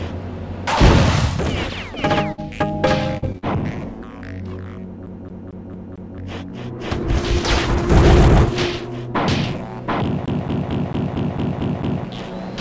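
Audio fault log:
2.32–2.40 s and 3.18–3.24 s: burst of packet loss. Roughly 60 ms, then 40 ms, went missing. The last sound is stretched and faded, and then the audio jumps ahead.
3.32–3.36 s and 3.38–3.44 s: short concealed packet loss. Brief holes of about 20 and 40 ms are patched by continuing the previous sound. Each leaves a quick smear before real audio returns.
5.06–6.18 s and 10.26–12.05 s: CD stuck on one turn. A 224 ms stretch repeats five, then eight times, with a tiny mute at each jump. It is an even, rapid stutter.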